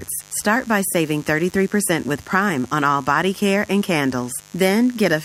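From start to end, the speech sits on a mains buzz locked to a 50 Hz supply. Sharp switching spikes, twice per cycle, leak into the signal path from something like a dimmer, a rectifier or a missing shield, producing a steady, raspy buzz roughly 25 dB below the speech. A spectrogram shows unbroken horizontal lines at 50 Hz multiples climbing well into the kilohertz range, and the waveform carries a spiky ripple repeating every 10 ms.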